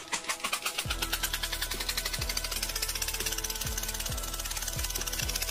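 At 0.51, 2.55 and 5.19 s, compressed frames are skipped. Whole blocks of the coded audio never reach the output, so the sound leaps forward by roughly 50 ms, 300 ms and 200 ms, lengths that fit a couple, about ten and about seven frames of roughly 26 ms each. Overlapping frames soften each join into a short smeared blip. A spectrogram shows an abrupt discontinuity in every band with a faint smudge, and the waveform shows a sudden envelope change without a sharp spike.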